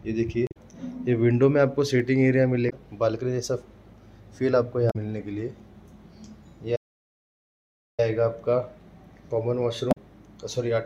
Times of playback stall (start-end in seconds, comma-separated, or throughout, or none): 6.75-8.00